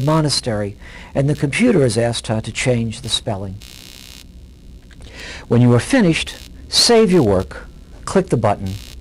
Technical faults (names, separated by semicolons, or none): computer activity noise